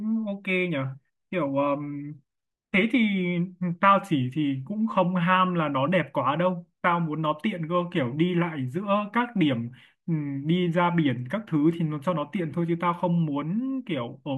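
Nothing goes wrong anywhere in this stretch of speech, so there's no technical fault to point to at any moment.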